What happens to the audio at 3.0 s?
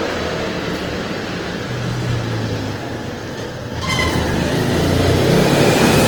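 At 3.0 s the sound is grainy, rough and noisy rather than clean, and this runs through the whole clip, not just that moment. The likely cause is Opus compression in its CELT music mode at a low rate, roughly what a 16 kbps stream produces. When bits run short, the encoder fills starved bands with noise or folded copies of lower ones. Bandwidth stays full, reaching about 20.2 kHz, and there is less swirl than MP3 would give, with plainly audible texture damage.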